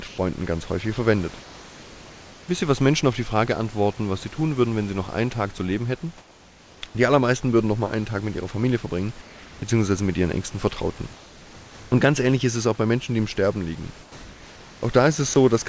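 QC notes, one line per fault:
0.08–0.18 s, comfort noise in place of the background: for about 100 ms the room's real background, which sits about 22 dB below the loud speech, gives way to a smooth, featureless hiss about 1 dB quieter. The likely cause is the sender pausing transmission in silence and the receiver synthesising noise shaped like the room. Unlike a voice-detector dropout, no speech is lost. Only the texture of the background changes.
15.34–15.36 s, sound dropped by the voice detector: about 20 ms of the speech itself vanishes and is replaced by the same kind of steady synthetic noise. The sender's detector likely mistook this quiet stretch for background and stopped sending. What distinguishes it from simple comfort noise is that real sound is missing, heard as a brief clipped gap in the speech rather than a change in the background between phrases.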